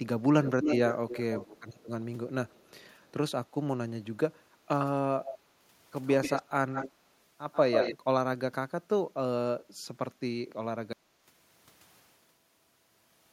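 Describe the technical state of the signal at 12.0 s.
At 12.0 s the speech is gone entirely: an audio dropout to silence, dead silence with no room tone, from 10.93 s to the end, likely from input loss while recording continued.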